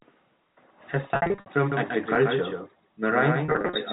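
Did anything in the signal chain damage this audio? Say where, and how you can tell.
Yes. Network damage is the most obvious. Packet loss with pitch repetition occurs twice in this speech. From 1.06 to 1.46 s, about 280 ms of audio is missing, scattered over 400 ms in runs no longer than 60 ms. From 3.45 to 3.81 s, 180 ms is missing over 350 ms, in runs up to 40 ms. The receiver fills each hole by repeating the last pitch period, so the voice briefly sounds held and buzzy. A plain dropout would go silent instead.

A doubled audio track starts abruptly at 1.72 s and lasts to the end. A second full-band copy runs roughly 150 ms behind the original and about 5 dB quieter. It is a single clean repeat with no decay and no room colouring, which separates it from acoustic echo or reverberation. It most likely comes from the same signal being captured a second time through a slower path, at the call-processing or mixing stage.

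An underrun with held sample at 2.15 s points to the driver or buffer stage. The output goes flat for 2.9 ms, which fits a 128-sample buffer running empty. The converter holds its last value instead of dropping to zero. No audio is lost, because playback resumes where it stopped, so the gap is nearly click-free. Concealed packet loss would fill the gap with repeated pitch cycles rather than a flat line. The G.711 telephone coding contributes the usual 4 kHz band limit.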